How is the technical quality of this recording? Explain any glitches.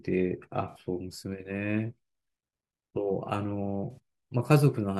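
Two brief glitches break up the speech, both from AAC frame loss with concealment. From about 0.69 to 0.76 s, and again from 3.91 to 3.98 s, the sound turns smeared and noisy, with a hollow, phasey quality, then snaps back. Each gap is about 64 ms, which fits roughly three lost AAC frames. With nothing to decode, the decoder rebuilt those moments from the last good spectrum. That patched-in guess lacks the true detail, so it blurs instead of going silent.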